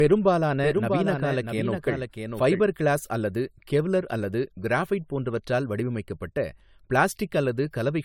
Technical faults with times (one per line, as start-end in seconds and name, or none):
0.00-8.05 generation loss
0.00-2.60 doubled audio track